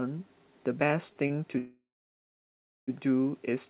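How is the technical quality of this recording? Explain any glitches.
The speech comes through a telephone-band call path with nothing above 4 kHz, which fits a 64 kbps G.711-style codec. Three timing glitches interrupt it, all shortly after the first second.

Short stalls from a late packet occur at 1.13–1.18 s and 1.28–1.32 s. The jitter buffer ran dry, and the receiver held the last sound for about 29 ms and 21 ms before resuming. Each is a brief drawn-out sound.

A call audio freeze runs from 1.58 to 2.90 s, likely caused by packets being held up in transit. A fading continuation gives way to about 1.0 s of silence, and then the speech resumes where it stopped.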